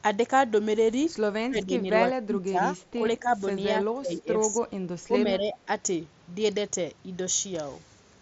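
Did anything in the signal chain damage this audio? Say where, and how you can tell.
Yes, in call processing: the speech is suppressed in double talk four times, from 1.42 to 2.74 s, 2.95 to 3.34 s, 3.65 to 4.81 s and 5.07 to 5.68 s. The level drops by around 25 dB in the first and third stretches and about 10 dB in the others. The likely cause is an echo canceller that mistook the talker for loudspeaker echo while both ends spoke and attenuated everything. The mSBC Bluetooth link's band limit near 7.7 kHz is normal for that codec.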